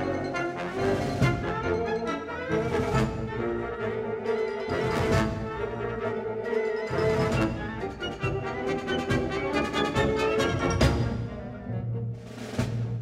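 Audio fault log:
Nothing to log here; I didn't catch anything off anywhere in the audio.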